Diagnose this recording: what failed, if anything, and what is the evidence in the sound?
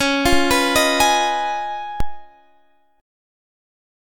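A DC step occurs at 2.00 s, in the converter or analogue input stage. The waveform's zero line jumps suddenly by about -9 dBFS, as when a converter recalibrates or an offset input is switched in. The jump is heard as a single low thump. The sound itself continues unchanged. The offset then drains away, at the rate of a 2 Hz high-pass, with a time constant of roughly 80 ms, leaving no lasting shift.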